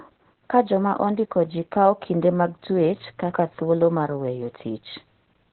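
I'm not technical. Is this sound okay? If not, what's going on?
No. Opus voice compression affects the whole clip, from start to finish. The speech was squeezed hard to save data, so the coder kept only the lower part of the sound and threw away everything above about 4 kHz, like a telephone line. It then rebuilt the voice from a rough sketch of its buzz and breath. That is why the speech sounds muffled, a little hoarse and slightly robotic throughout.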